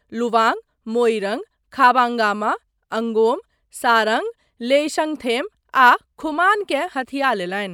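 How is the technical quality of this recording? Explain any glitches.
Nothing here glitches at all, so there's really nothing technical to pick apart in this short speech recording.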